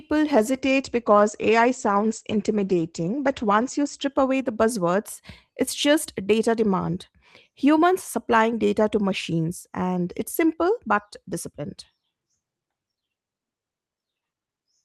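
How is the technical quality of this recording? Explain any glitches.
The recording has one clear glitch near the start. A call bitrate drop from 0.35 to 4.51 s made the encoder code more coarsely and cut the bandwidth from 20 kHz to 8 kHz. The speech turns muffled and rough until "buzzwords it's just data", which fits a fall from 32 to 12 kbps.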